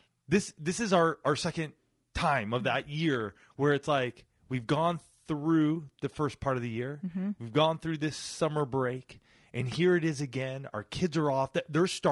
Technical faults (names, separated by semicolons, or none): low-delay AAC compression